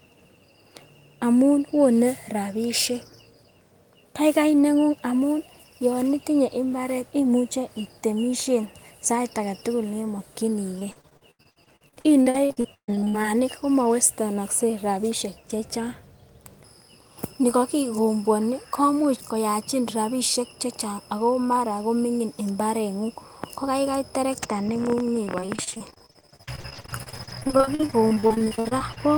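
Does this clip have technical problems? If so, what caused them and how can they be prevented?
Yes. Repeated packet loss (robotic sound) at 10.79–13.29 s, ending before "komowestenokse rabishek chechang", and at 25.25–28.98 s. Dozens of dropouts, up to 136 ms, are patched by extending prior sound. Prevent with a stable network and adequate jitter buffering.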